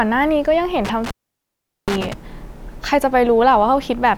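At about 0.85 s the speech starts breaking up with an intermittent contact, a loose cable or plug letting go, and the trouble runs until roughly 2.14 s. Within that stretch the connection opens for about 0.77 s, so the speech simply drops out and only a faint hiss is left while the line is open. You'll hear little crackles right where the contact breaks and again where it scrapes back together.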